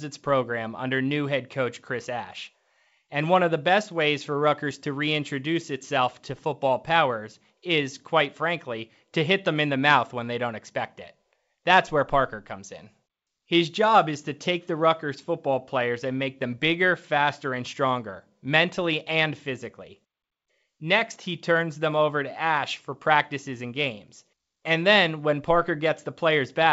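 No technical faults are audible.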